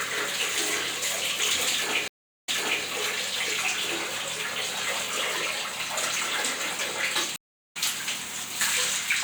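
At 2.08–2.84 s and 7.36–7.77 s a stream reconnect drops the connection for about 0.37 s, a clean full-band blank gap on spectrogram and waveform, then a fresh decoder fades in mid-stream. The first resumes 0.39 s earlier, repeating audio; the second jumps roughly 0.4 s ahead.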